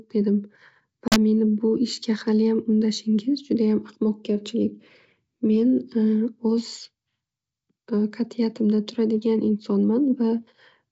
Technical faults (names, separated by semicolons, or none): packet loss on an ADPCM call